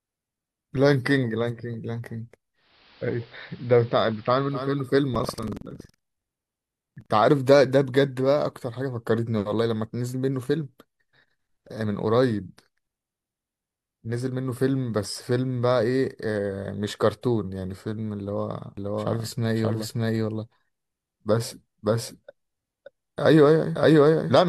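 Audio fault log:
2.54–4.92 s, digital radio blending to analogue: the receiver cross-fades over 420 ms to the AM broadcast of the same station. The level drops about 2 dB, and a hiss appears roughly 25 dB below the signal. A plain low-pass filter or a low-bitrate codec would dull the top end without adding a hiss floor. Here the hiss and the gradual cross-fade show that a different analogue path has taken over.
5.11–7.13 s, buffer tearing: a robotic rattle at 21.5 Hz runs under the sound and is present only while there is signal. The rate fits a 2048-sample buffer. In each period the reading and writing positions cross, so roughly 15 percent of every buffer holds audio from about a tenth of a second earlier, with hard joins on both sides. Unlike dropouts, there are no silent gaps. The fault is a steady periodic splice of stale material.
18.77 s to end, doubled audio track: a second full-band copy of the speech follows about half a second behind at roughly the same level. 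It starts abruptly and continues to the end of the clip. The copy has no decay tail and no room colouring, which rules out reverb or acoustic echo. It is a clean duplicate at one fixed offset, likely from a slower second capture path or an edit that leaves two copies out of step.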